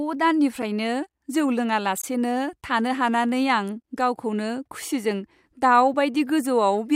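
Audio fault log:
2.02 to 2.04 s, block of digital silence: a 20 ms stretch of samples was output as zeros, which points to a buffer not filled in time. The speech cuts to dead silence and back with no fade, giving a short hole.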